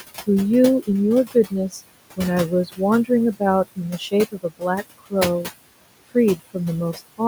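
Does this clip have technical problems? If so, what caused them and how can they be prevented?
Yes. The noise suppressor turns down what it judges to be steady noise by about 19 dB throughout, leaving noise suppressor artifacts: the remaining room noise, about 14 dB below the speech, sinks between the words and rises under them. A gentler suppression depth would prevent this.

The noise suppressor also took quiet parts of the speech for noise, causing speech cut by the noise suppressor at 1.25–1.8 s, 2.66–3.41 s, 3.76–5.5 s and 6.07–6.56 s. Short pieces drop by about 16 to 21 dB, with the longest span losing about 0.4 s in total, so those sounds come out swallowed or faint. A less aggressive suppressor setting, or more sensitive speech detection, would prevent this.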